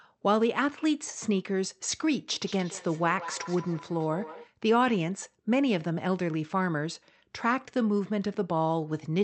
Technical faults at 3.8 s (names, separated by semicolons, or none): feedback echo between two devices